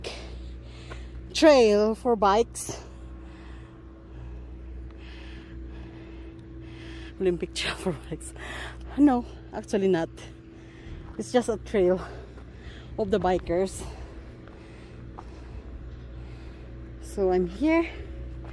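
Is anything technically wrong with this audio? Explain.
No, nothing technically wrong.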